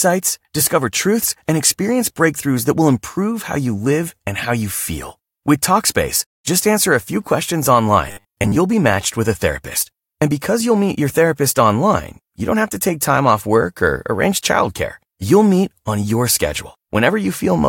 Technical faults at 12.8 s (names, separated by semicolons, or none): none